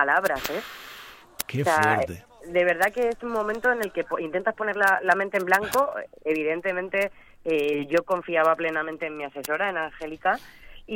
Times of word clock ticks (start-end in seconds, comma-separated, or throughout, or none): 0.12-10.93